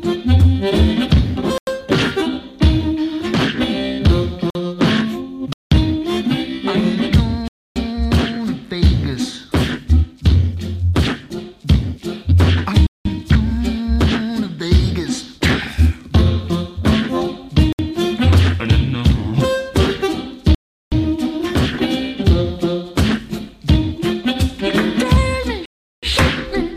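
Blocks of digital silence occur at 1.58–1.67 s, 4.50–4.55, 5.53–5.72, 7.48–7.76, 12.87–13.05, 17.73–17.79, 20.55–20.92 and 25.66–26.03 s. Each is a 49 to 372 ms hole, likely where output buffers went unfilled. Some lengths fit 4096-, 8192- and 16384-sample buffers. On a waveform they are flat, silent stretches with abrupt edges, and on a spectrogram they are blank vertical bands.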